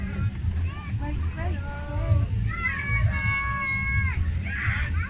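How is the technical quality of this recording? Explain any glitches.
No glitches or faults audible.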